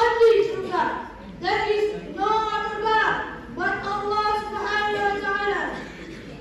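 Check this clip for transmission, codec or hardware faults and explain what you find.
One fault is present: hard clipping at the very start, from 0.01 s to 0.40 s. During that stretch the sound drives about 5 dB past what the signal path can carry, so each peak is sliced off flat. Those squared tops add harmonics high in the spectrum, heard as crackle on the peaks. Unlike soft clipping or a limiter, the edges are abrupt rather than rounded.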